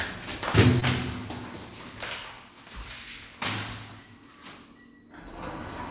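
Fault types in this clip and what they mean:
Short concealed packet loss: About 20 ms of audio failed to reach the decoder in time, around 0.80 to 0.83 s. The receiver covered the gap by extending the preceding sound for roughly 14 ms, then crossfading back into the real signal. The result is a brief smear or wobble rather than silence. A short transient there may be lost. The surrounding band stops at 4 kHz, which fits a G.711 mu-law call path.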